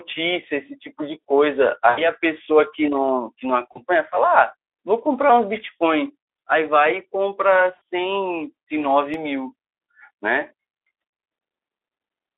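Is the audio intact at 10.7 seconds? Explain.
Yes, at 10.7 seconds the speech is intact: no dropout, glitch or other fault occurs there.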